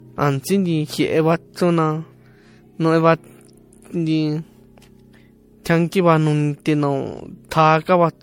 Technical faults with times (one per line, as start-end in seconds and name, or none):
0.00-8.23 generation loss